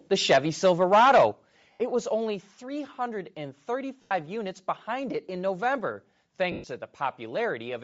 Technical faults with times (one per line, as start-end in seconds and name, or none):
0.00-7.83 Bluetooth LC3 compression
0.30-0.38 microphone overload
0.33 microphone volume stepped down
0.65-1.26 microphone overload
1.32 microphone volume stepped down
1.72-1.80 lost LE Audio frames
2.34 microphone volume stepped down
4.02-4.11 lost LE Audio frames
6.52-6.64 lost LE Audio frames